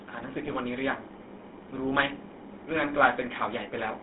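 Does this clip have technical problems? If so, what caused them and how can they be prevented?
Yes. GSM full-rate codec coloring runs throughout: the speech is squeezed into roughly a 250 Hz to 3.7 kHz band and rebuilt from a vocal-tract filter driven by sparse, regularly spaced pulses, giving the buzzy, gravelly roughness that fits a 13 kbps GSM encode. Prevention: carry the call over a wideband or higher-rate codec.

GSM bit errors strike at 0.44 to 0.51 s and again at 2.08 to 2.13 s. Corrupted filter, pitch or gain parameters reach the decoder, so the spectrum warps and the level jumps, producing brief squawks and gargling that fit about four and two damaged frames. Prevention: keep a stronger radio link with adequate error protection.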